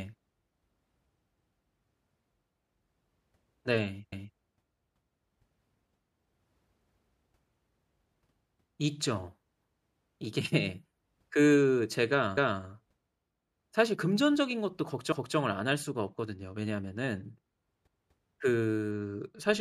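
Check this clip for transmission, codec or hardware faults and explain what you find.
The speech has overlapping chunks at 4.12–4.38 s, 12.37–12.63 s and 15.12–15.38 s. Each 2.5 s chunk starts 250 ms early, so that stretch plays twice, heard as a stutter and seen as duplicated waveform.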